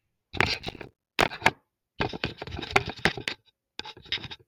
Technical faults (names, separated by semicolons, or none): processor overload crackle